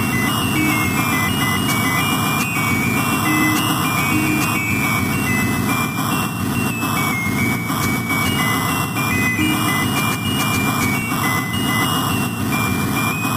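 The audio has three abrupt skips, at 6.23 s, 9.36 s and 11.02 s. Each is heard as a small jump in the sound. Nothing goes silent. The sound simply lurches forward. The first skip loses about 20 ms, and the later two only a few milliseconds each. The likely cause is a dropped buffer (overrun). The recording software fell behind, so the hardware overwrote samples before they were read, and the surviving audio was joined end to end.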